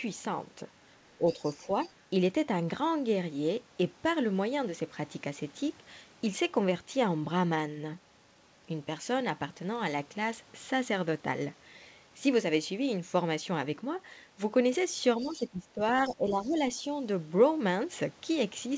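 Near the start, the speech is suppressed in double talk: it dips by about 5 dB from 1.18 to 1.4 s and again from 1.58 to 1.69 s. This is likely an echo canceller turning the near talker down because it cannot separate that voice from loudspeaker echo while both sides speak. Later dips are deeper, about 15 dB from 15.18 to 15.81 s and about 10 dB from 16.08 to 16.59 s.

The other side's voice is leaking through as faint fragments. The first appears at 1.3 to 1.5 s, about 20 dB below the speech. The second, at 1.83 to 1.93 s, is about 25 dB down. The third, at 15.21 to 15.46 s, is about 20 dB down, and a very faint scrap at 16.43 to 16.49 s sits about 35 dB down. These fragments are likely residual loudspeaker echo that the canceller missed. Across all of this, the call path's band limit holds at 8 kHz, which fits G.722.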